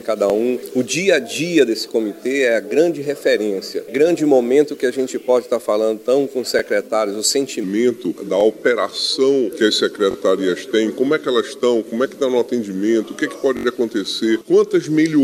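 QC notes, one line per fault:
0.30–0.32, 6.59–6.61, 8.41–8.43, 10.11–10.16, 13.57–13.65 s, repeated buffer: a 21 ms slice replays once, twice at 10.11, four times at 13.57, giving hard-joined stutters that suggest a 1024-sample buffer, with no audio missing, unlike a dropout.
7.64–15.24 s, section at the wrong speed: playback runs at 0.848 times, so pitch drops by about 3 semitones and tempo slows together to the end, likely from a wrong clock rate rather than pitch processing.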